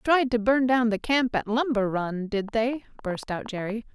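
A speech recording carries a train of clicks from 2.49 s to 3.71 s: roughly ten sharp, similar-sounding ticks at an uneven pace of about 7.4 per second, standing out around 5 dB above the speech itself, so they pop through clearly rather than hiding under it. The near-identical shape of each click points to a repeating electrical pulse, likely interference from nearby equipment or a faulty connection or power supply.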